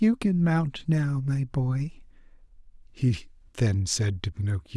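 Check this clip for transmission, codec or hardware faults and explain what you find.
No faults detected here.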